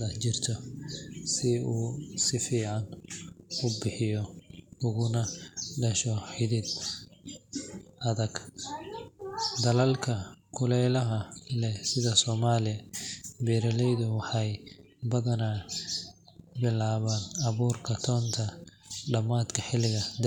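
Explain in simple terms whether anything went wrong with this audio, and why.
Nothing went wrong: no technical faults can be heard anywhere in the speech.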